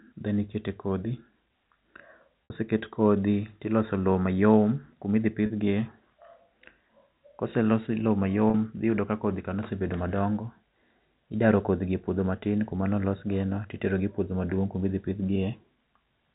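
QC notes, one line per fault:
2.44–2.50 s, 5.46–5.50 s, 8.50–8.54 s: packet loss with pitch repetition. Gaps of 60 ms before "kodhi tiloso lowo", 40 ms after "kuma idhi", and 40 ms between "los lowo" and "dhi yudo ka kodhi", consistent with lost 20 ms packets. The receiver loops the last pitch period, producing a brief held buzz. The waveform shows identical repeating cycles, and the spectrogram shows frozen, flat harmonic lines within the G.711 telephone band.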